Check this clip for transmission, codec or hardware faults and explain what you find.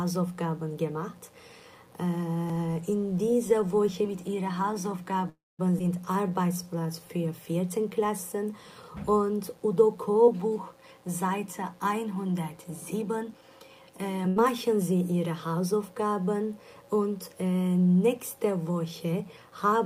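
Several faults are present: one from the hardware side and five kinds from the network and playback path.

A mains buzz at 60 Hz runs through the whole clip, about 35 dB below the wanted sound. Sharp switching spikes twice per mains cycle spread harmonics into the kilohertz range. That makes it a raspy buzz rather than a smooth hum, and its constant level separates it from the brief network faults.

From 5.29 to 5.61 s there is a call audio freeze. The last sound is stretched into a fading buzz or hiss, then about 210 ms of silence, before playback resumes where it stopped. The likely cause is packets held up until the jitter buffer ran dry. Nothing is lost; roughly 0.3 s of delay is inserted, which is what distinguishes it from packet loss.

At 5.79 s the audio makes a skip ahead. Roughly 100 ms is dropped, and the two sides are joined with only a 9 ms bridge, so playback lurches forward. 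Unlike the freeze, there is no audible gap, just a missing piece. This removes part of the delay the freeze had added.

From 6.12 to 7.18 s a jitter buffer slow-down repeats pitch periods to rebuild reserve, adding 122 ms. The audio plays at 89% speed with the pitch unchanged. It sounds drawn out, not lower or detuned as a tape-speed fault would be.

Jitter buffer speed-ups occur from 12.40 to 13.60 s, removing about 100 ms, and from 18.84 to 19.52 s, removing about 50 ms. Both run at 107% speed. Short pitch-period slices are cut to reduce excess delay, so the audio sounds hurried at steady pitch. The timing is compressed smoothly rather than jumping as in a skip.

From 14.28 to 14.38 s a burst of packet loss removes 80 ms. The receiver fills 76 ms by extending and fading the preceding sound, then resumes further on. The decaying fill followed by missing material separates it from the freeze, which loses nothing.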